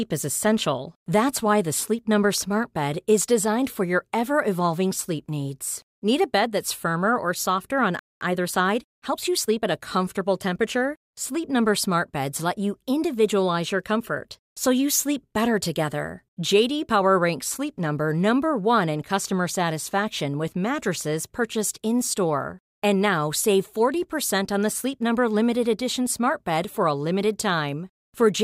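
A playback stall at 7.99 s, just after "firmer or softer on", cuts the speech off mid-flow for about 0.22 s. The player likely ran short of data or had its output thread blocked, leaving silence until it recovered and resumed where it stopped.

Time-compressed catch-up follows from 8.21 to 9.67 s, ending before "a comfortable temperature". To work off the backlog, the player trims tiny slices and cross-fades the joins, running about 1.15 times faster at unchanged pitch, so the speech sounds hurried.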